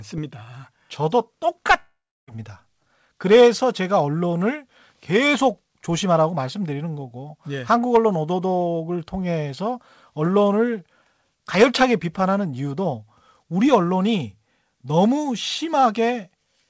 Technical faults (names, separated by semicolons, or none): long network dropout